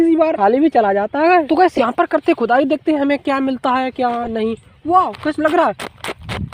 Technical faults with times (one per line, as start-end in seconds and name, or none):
1.75-1.84 corrupt frame decoded
4.23-4.28 corrupt frame decoded